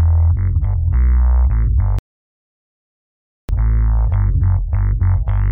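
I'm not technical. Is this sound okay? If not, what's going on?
No. At 1.99 seconds the sound stops and goes silent for about 1.5 seconds. At 3.49 seconds it picks up exactly where it left off. This is a rebuffering stall: the player ran out of downloaded audio and waited for more. Nothing is missing, but the pause adds time.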